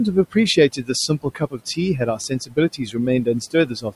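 Speech cut by the noise suppressor hits at 0.56–0.89, 1.08–1.78, 2.16–2.57, 2.77–2.95 and 3.51–3.93 s, dipping about 12 to 18 dB. The suppressor mistakes quieter speech for room noise, which sits about 21 dB below, so those bits sound swallowed.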